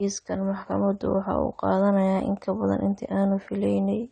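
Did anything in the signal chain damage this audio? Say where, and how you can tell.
Yes. Throughout the speech the sound is dull and smeared, with nothing above 9 kHz, and sibilants and sustained vowels take on a warbling, fizzy texture that is plainly audible. The damage is at the codec stage, most likely AAC compression at a low bitrate, such as 32 kbps AAC-LC. To save bits, the encoder dropped the high band entirely and coarsely quantised the remaining frequency lines in each frame, which smears detail and leaves that unstable, swirly grain.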